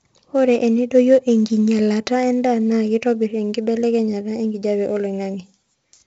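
From start to finish the speech carries 4-bit ADPCM compression damage, and it is heavy. Each sample is coded as a coarse 4-bit difference from a predicted value, so the quantisation error rides on the signal level: louder syllables pick up a gritty hiss, and sharp onsets break up where the adaptive step lags behind. The top end stops near 7.8 kHz, and at 64 kbps this fits a 16 kHz sample rate, leaving the speech dull.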